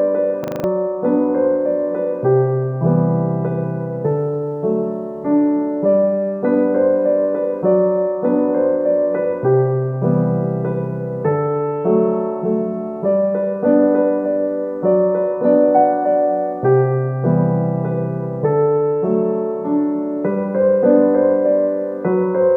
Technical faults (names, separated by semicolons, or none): system hang loop